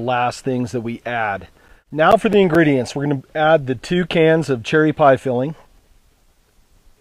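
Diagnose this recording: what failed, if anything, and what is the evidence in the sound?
CD scratch ticks from 1.25 to 2.98 s: nine ticks, about five per second. At the storage and playback stage, a disc blemish defeats error correction once per revolution, muting or interpolating up to about 10 ms.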